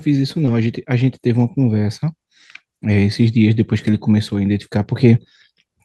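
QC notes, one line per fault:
0.45–0.49 s, short concealed packet loss: about 20 ms of the speech did not reach the decoder in time. The receiver extended the preceding sound, following its pitch if voiced or as shaped noise if not, then blended back, leaving a brief smear or wobble.
0.47–0.49 s, 1.39–1.41 s and 3.87–3.93 s, lost packet rebuilt from error correction: these stretches of 20 ms, 20 ms and 40 ms (the last fits two packets) were replayed from low-bitrate copies carried in the following packets. There is no gap, but each sounds rougher and noisier.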